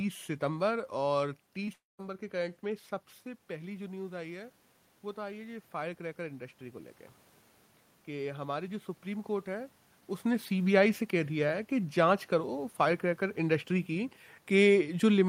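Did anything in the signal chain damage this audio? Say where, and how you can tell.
Yes. At 1.65 to 1.69 s there is a brief smear in the speech. This is short concealed packet loss at the network stage. About 20 ms of audio arrived too late, and the decoder bridged the gap by extending the preceding sound before blending back in.

Just after, from 1.73 to 2.01 s, the sound trails off as a fading buzz or hiss into roughly 0.18 s of silence. It then resumes with a chunk simply gone. This is a long network dropout, likely caused by about a quarter-second of packets never arriving.

From 5.14 to 6.99 s the speech and background noise swell together, rising about 3 dB over nearly two seconds. This is automatic gain rising in call processing. The input level had fallen by about 11 dB, so the AGC slowly raised its gain to compensate.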